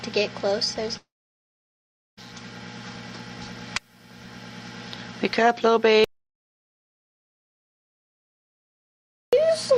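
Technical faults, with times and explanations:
0.97–2.19 s, long network dropout: the sound breaks off and the last moment is drawn out into a fading buzz or hiss, then about 1.1 s of near silence before the audio resumes further on. This is likely a stall in arriving packets, with roughly 1.2 s never played and concealed by extending what came before.
6.04–9.33 s, audio dropout to silence: the sound cuts out abruptly into silence with no room tone, lasting about 3.28 s before returning mid-flow. This likely reflects the input being lost while the recorder kept writing silence, so that stretch is simply gone.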